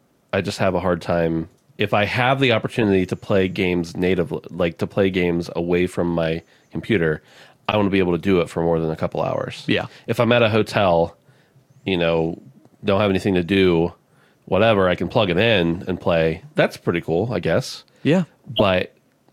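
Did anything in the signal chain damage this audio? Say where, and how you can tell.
Yes, it's the codec stage: corrupt frames got decoded. There are four short glitches, at 2.82 to 2.84 s after "I have the", 7.71 to 7.76 s after "away from my computer", 15.72 to 15.75 s after "I can plug it", and 18.56 to 18.62 s. Each lasts only one to three frames, with the loudest ones peaking around -5 dBFS. Flipped bits sent wrong gains or codes to the decoder, which played them anyway and put energy at the wrong frequencies.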